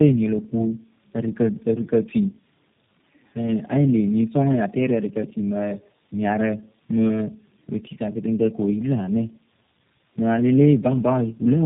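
Speech throughout shows tandem speech coding: the audio sounds rough, muffled and warbly, with nothing above 3.5 kHz. This fits three low-rate speech codecs in series, likely ending in G.729A, each re-encoding the previous codec's degraded output.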